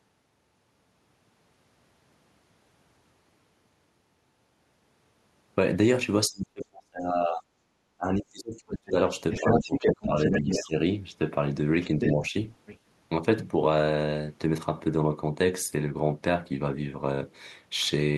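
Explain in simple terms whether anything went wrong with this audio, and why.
Two things went wrong, both around the middle of this speech clip.

The first is speech suppressed in double talk. The talker's voice sinks or nearly vanishes from 6.28 to 7.46 s, 7.97 to 8.96 s and 9.41 to 10.75 s, and dips slightly from 12.16 to 12.34 s. The deepest drops come first and are close to silence. The likely cause is two people talking at once. The echo canceller could not tell the talker from the loudspeaker's sound, so it turned both down.

The second is the other side's voice leaking through. A second voice can be heard from 8.76 to 8.91 s, 9.31 to 10.68 s, 11.82 to 12.29 s and 12.66 to 12.78 s. From 9.31 to 10.68 s it is about as loud as the main talker. The last scrap is faint. This is likely the far end's voice playing from the talker's loudspeaker. The echo canceller did not fully remove it from the microphone.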